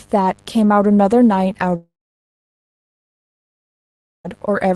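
A speech recording carries a mains buzz throughout: a raspy 50 Hz buzz roughly 35 dB below the speech, rich in harmonics up to several kHz rather than the smooth single tone of plain hum. From 1.75 s to 4.26 s there is a long network dropout, the likely cause of the gap. The last sound smears into a fading buzz or hiss for a fraction of a second, then silence follows, and speech resumes with about 2.5 s lost rather than merely paused. The audio passed through a call path whose sound is band-limited near 12 kHz, which fits Opus at around 20 kbps.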